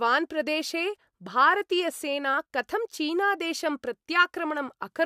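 No technical faults can be heard in this speech recording. There is nothing to place on a timeline.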